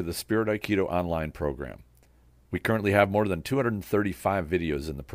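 No technical faults are audible anywhere in the speech recording.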